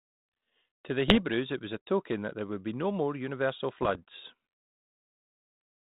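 Rough, crackling bursts with pops and brief jumps in level break into the speech from 1.08 to 1.22 s and again from 3.82 to 3.99 s. These are bit errors on an ADPCM link, with roughly half a percent of bits flipped in the first burst and slightly more in the second. Each flipped bit throws off the decoder's step size and prediction, so the damage rings on for a few milliseconds instead of staying a single click.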